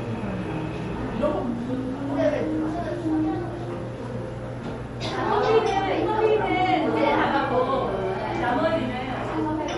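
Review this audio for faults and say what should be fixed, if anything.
MP3 compression throughout: nothing above 11.1 kHz, and plainly audible watery, swirly artefacts, likely from a low bitrate around 48 kbps. Encode at a higher bitrate or keep a lossless source.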